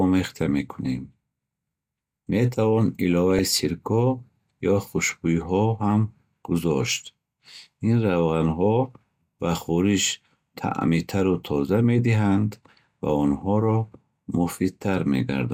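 From 3.12 to 3.39 s the speech burbles: DAB burbling, where weak reception let bit errors into the MP2 audio data, putting short blips of noise into sub-bands.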